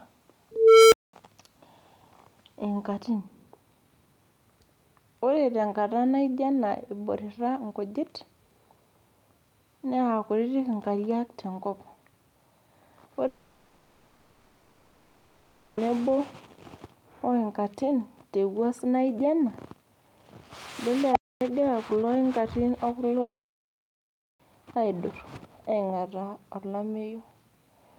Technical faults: unstable filter; long network dropout

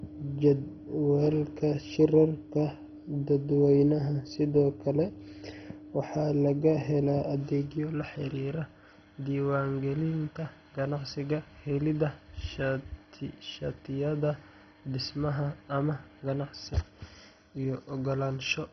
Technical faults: MP2 compression

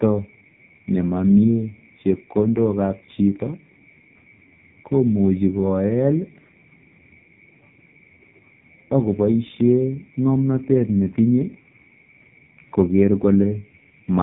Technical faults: AMR narrowband mobile codec

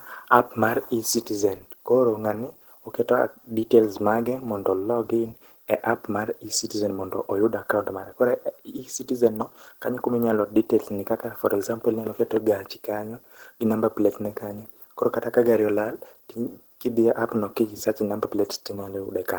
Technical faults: Opus compression

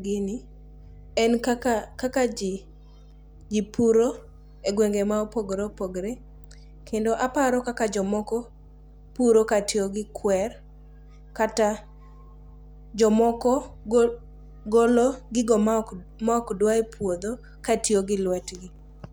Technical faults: mains hum

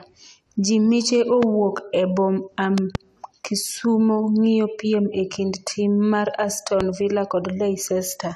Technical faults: loud pop

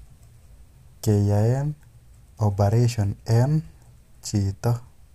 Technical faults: none

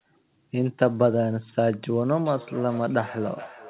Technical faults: feedback echo between two devices

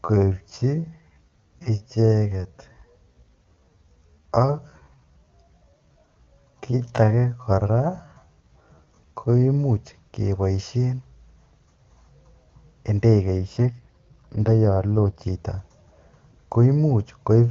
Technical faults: time-stretched section; AMR rate drop

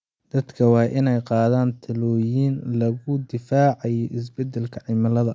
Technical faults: none

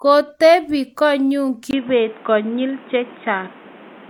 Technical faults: input switched to a poorer device

